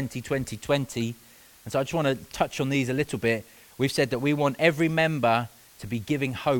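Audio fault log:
throughout: low bit depth with dither. A constant, even hiss sits under the speech at roughly 30 dB below the signal. The quantisation uses very few levels, which fits an 8-bit word length. Dither was added before rounding, so the error does not follow the waveform as harsh, signal-dependent distortion. It spreads out instead as steady broadband noise that stays the same through loud and quiet passages alike.
0.44 s: gap between stream segments. A short hole of about 4 ms, with abrupt edges, breaks the speech near the start. The time stamps of adjacent stream segments do not meet. The player bridges the mismatch with inserted silence, so the audio is pushed later rather than lost. Because the cut is hard on both sides, it registers as a brief tick or dropout, not as a fade. It occurs once in this clip.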